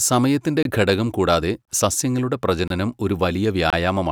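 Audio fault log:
0.63, 1.65, 2.68 and 3.70 s, gap between chunks: four 25 ms dropouts interrupt the speech at a steady rhythm. The audio arrives in one-second chunks with silence inserted at each join, so nothing is missing but the flow stutters.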